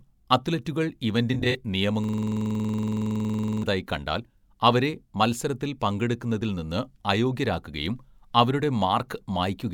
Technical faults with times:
1.33-1.55 AAC frame loss with concealment
2.04-3.63 system hang loop

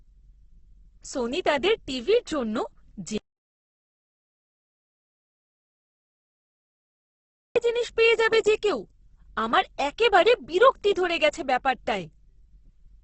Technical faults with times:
0.00-13.03 Opus compression
3.18-7.56 audio dropout to silence

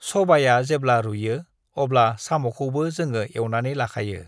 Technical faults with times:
none

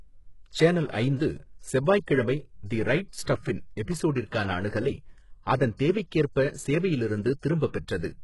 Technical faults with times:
0.00-8.23 HE-AAC compression
3.23-3.27 pre-echo
5.77-5.79 pre-echo

